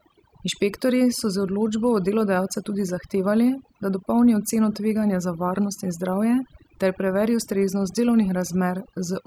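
Overdone noise removal affects the whole speech recording. An over-aggressive noise reducer pulls individual frequency bands down hard wherever they sit close to its noise estimate, taking soft speech detail with them. Gaps become near-silent with twinkling specks.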